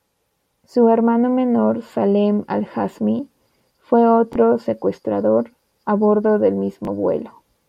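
Bluetooth stutter at 4.33–4.36 s, just before "secuestrador a bordo del", and 6.85–6.88 s, right after it: a lost packet makes the receiver replay about 21 ms, giving a brief repeated blip.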